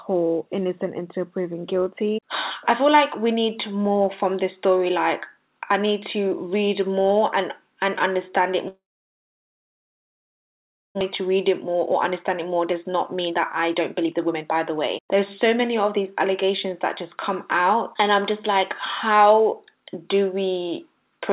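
A long network dropout is the likely cause of the break from 8.68 to 11.03 s: audio stopped arriving, so the receiver stretched the last sound into a fading fill lasting about 2.3 s, most of which (about 2.15 s) is silent. When the audio returns, roughly 1.6 s of it is simply missing, and the stream resumes about 0.7 s further behind than before. That backlog then triggers jitter buffer speed-up. To shrink the excess delay, the receiver repeatedly cuts out short pitch-period-sized pieces, so the audio runs faster while its pitch stays the same. This happens from 11.66 to 17.18 s at 110% speed, removing roughly half a second and sounding hurried, then from 17.61 to 18.56 s at 105%, and from 19.11 to 19.81 s at 107%, each of the last two trimming only a few tens of milliseconds. Throughout, the audio carries the band limit of a G.711 mu-law call path, with nothing above 4 kHz.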